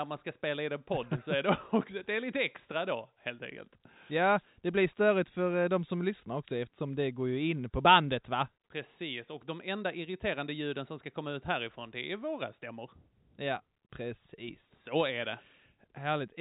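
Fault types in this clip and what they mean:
No fault can be heard anywhere in the speech. It carries the narrow band of G.711 telephone coding, with nothing above about 3.8 kHz, and any coding damage from the 64 kbps link is faint at most.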